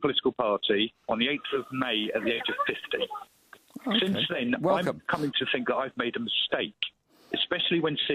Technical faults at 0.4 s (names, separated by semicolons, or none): none